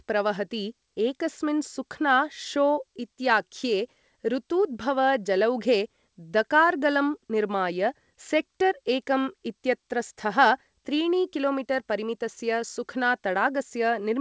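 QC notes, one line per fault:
No faults are heard in this speech clip. It comes through a WebRTC call path with nothing above 8 kHz, which fits a wideband call codec such as G.722.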